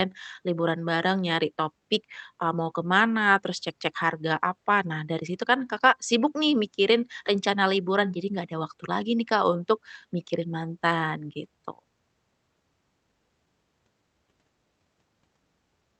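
Clock drift between sender and receiver runs through the whole clip. The sender's clock is about 1% slow, so the jitter buffer keeps draining. On a waveform, brief discontinuities appear at uneven spacing rather than on a steady grid, while the spectrogram stays capped near 8 kHz from the Opus call path.

Repeated timing corrections follow from 0.42 s to 15.98 s. Playback runs at 99% speed as the receiver repeats short slices to fill the gap, adding roughly 150 ms overall. These sound like faint hiccups and slight tempo wobble, and show as tiny duplicated segments and small phase jumps at splice points.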